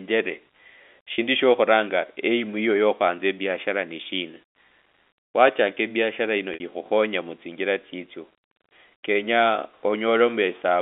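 At 1.14 to 1.18 s and again at 6.54 to 6.60 s, the speech briefly holds a slightly buzzy, repeated tone. This is packet loss with pitch repetition. The receiver looped the last pitch period across gaps of 40 ms and 60 ms, which fit two and three lost 20 ms packets.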